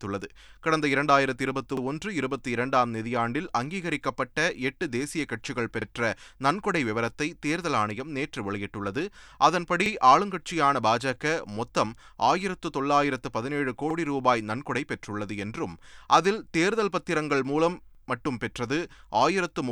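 Overlapping chunks appear at 1.77, 5.82, 9.86, 13.91 and 17.95 s, a stutter recurring every 4.0 s through the speech. The audio was handled in 4-second blocks, and each block began 44 ms before the previous one had finished, so that sliver of speech plays twice at every join. Each repeat lasts 44 ms, from 1.77 to 1.82 s for the first, and is heard as a brief click or doubled fragment at a steady rhythm.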